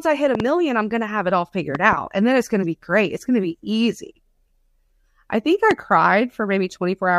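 At 0.35 to 0.42 s a loud pop arrives as a quick double, peaking about 10 dB above the speech. A second pair follows at 1.75 to 1.95 s at a similar level, and a single harder pop at 5.71 to 5.73 s reaches about 15 dB above. Each is likely a voltage pulse from a plug, switch, static or driver glitch, shaped by the downstream circuitry into a sharp thump, with the speech continuing underneath.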